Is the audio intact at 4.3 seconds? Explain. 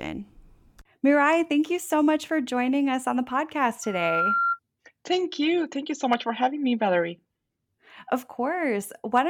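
No. A loudspeaker feedback squeal runs from 3.83 to 4.59 s, starting just after "us on the podcast". The microphone is picking up the loudspeaker it feeds, and at 1.4 kHz the gain around that loop exceeds one, so that frequency reinforces itself on every pass. It swells over roughly 0.4 s into a piercing single-pitched whistle that reaches about the same loudness as the speech before it stops.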